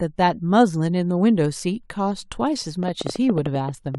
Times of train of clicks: 2.83-3.96

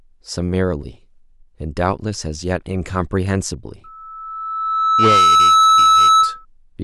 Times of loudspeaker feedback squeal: 3.84-6.45

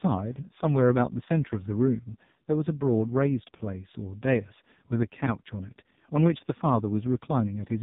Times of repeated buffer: none

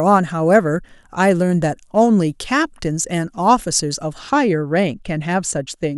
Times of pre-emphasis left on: 0.00-4.19

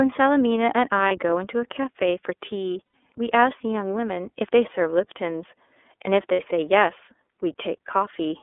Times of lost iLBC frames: 1.08-1.12, 2.84-2.93, 6.32-6.40

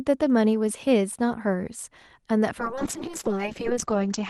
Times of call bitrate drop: 2.62-4.29

